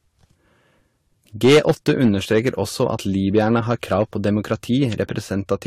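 Hard clipping runs through the whole clip: the speech is driven about 8 dB past full scale, so around one percent of samples are sliced flat, adding crackle on peaks. Transcoding between lossy codecs also runs throughout: nothing sounds above 16.4 kHz, and the layered artefacts heard together likely come from AAC-LC at 64 kbit/s re-encoded to Vorbis at 42 kbit/s.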